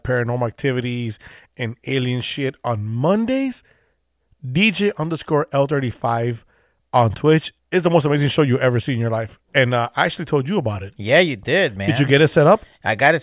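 No technical faults are audible.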